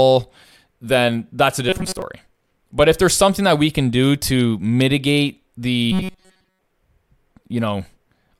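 From 1.69 to 2.02 s, after "then that's a", and from 5.92 to 6.61 s, after "can do to mitigate", the speech becomes a rigid metallic buzz at 188 Hz: robotic sound, likely from repeated short buffers of about 5.3 ms replacing most of the real audio.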